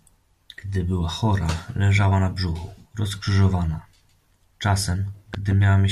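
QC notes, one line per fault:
5.34 to 5.54 s, loud pop: two sharp pops land in quick succession near the end, jumping something like 10 dB above the speech, which keeps going right underneath them. That's the sound of a sudden voltage step or spike being added to the signal. The circuitry downstream shapes each spike into a short thump. The likely cause is a plug, switch, static discharge or driver glitch.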